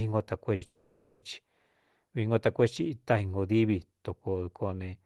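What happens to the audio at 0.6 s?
A short stall from a late packet runs from 0.55 to 0.63 s. A packet arrived late and the jitter buffer ran dry, so the receiver held the last sound for about 60 ms before resuming in the same place. It is heard as a brief drawn-out sound with a faint buzz or dip. On a spectrogram the harmonics run flat and unchanging for that stretch.

A call audio freeze follows from 0.65 to 1.24 s. The jitter buffer emptied again, likely because packets were held up in transit, and the last sound was extended as a fading buzz or hiss for about 570 ms, ending in about 30 ms of silence before the audio picks up where it stopped. The waveform shows a repetitive, decaying envelope, and the spectrogram shows smeared, static bands thinning out before the gap.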